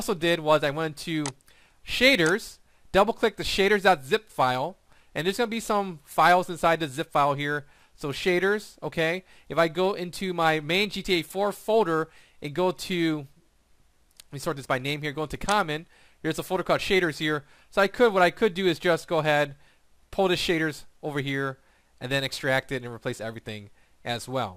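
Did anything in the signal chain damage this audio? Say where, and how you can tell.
No, nothing in the signal chain damaged this audio.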